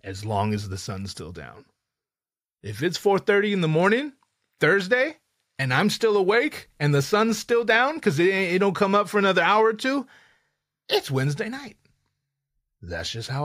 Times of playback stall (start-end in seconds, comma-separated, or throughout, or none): none